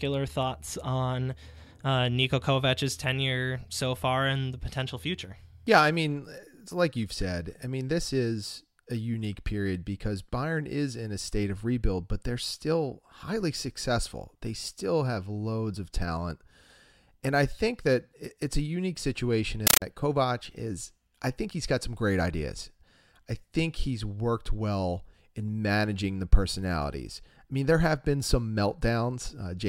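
At 19.67 s, just after "it's a unique situation", the speech is replaced by loud, chattering static until 19.82 s: a compressed stream played as audio. Undecoded bitstream data reaches the output as samples, giving 9.3 ms noise bursts at 31.25 Hz, which fits AC-3 framing.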